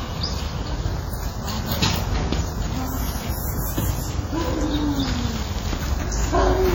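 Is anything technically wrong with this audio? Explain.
Yes. Throughout the clip, the sound shows heavy WMA compression damage. It rings and sounds washed out. A hiss rises and falls with the signal. The likely cause is a transform codec working in long blocks. Each block spreads its quantisation noise over tens of milliseconds around the sound. At this strain, weak spectral lines are zeroed, so detail drops out. The damage fits a low bitrate of about 32 kbps. Nothing is present above 18.7 kHz.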